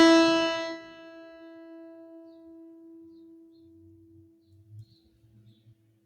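A piece of music runs through a noise suppressor meant for speech for its whole length. The suppressor reads sustained tones, ambience and reverb as noise and pulls them down, so the level swings by roughly 10 dB as held material and decays are repeatedly attenuated.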